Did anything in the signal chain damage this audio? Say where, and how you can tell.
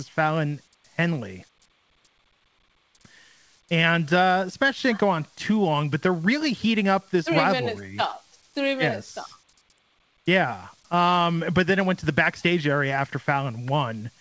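No, nothing damaged this audio.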